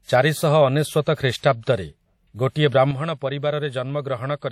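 Throughout the speech, a ringing, washy quality and a hiss that breathes with the signal point to likely WMA compression at a rate that fits roughly 48 kbps. A spectrogram shows a hard ceiling near 17.7 kHz and blocky, smeared patches where weaker detail has been dropped.

At 1.42 s comes a pre-echo: the codec spread quantisation noise across its block, so about 14 ms of hiss leads a sharp attack and softens it. In the waveform, a thin haze rises just before the onset. On a spectrogram, broadband noise appears a moment early.

From 2.91 s to the end, the level drops at once by about 7 dB, a sudden gain jump likely caused by a gain change applied without any ramp. Speech and background noise fall together. The waveform envelope steps down abruptly, and the spectrogram darkens evenly across all frequencies.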